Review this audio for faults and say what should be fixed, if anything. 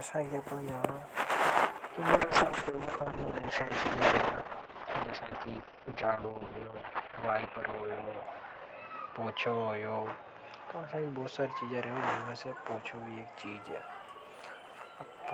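A call bitrate drop runs from 2.14 to 13.67 s. The coding turns coarse and the treble is cut from 20 kHz to 6 kHz, which fits a fall from 32 to 7 kbps, bottoming out for about 5.6 s. To prevent it, stabilise the network path and set a higher minimum bitrate floor for the encoder.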